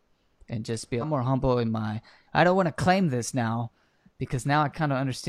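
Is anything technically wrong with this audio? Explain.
Yes, there's one glitch in this speech. Between 0.98 and 1.03 s, right after "and just be" and before "more humble in my", you get damaged data in the compressed stream: corrupted bytes trip up the decoder, it loses sync hunting for the next frame header, and you hear a quick glitch in the speech.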